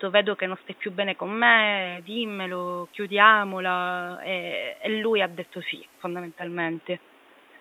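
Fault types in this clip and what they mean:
Digital radio blending to analogue, 1.70 to 6.65 s: after "stai più bene con", reception drops to the FM signal, adding hiss and about 3 dB less level.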